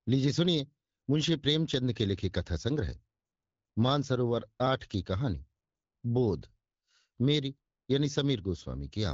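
Nothing to flag here: the speech comes through an AMR wideband (HD Voice) link at 12.65 kbit/s, where the codec leaves only a light touch on the sound, and there isn't a single technical fault to point at.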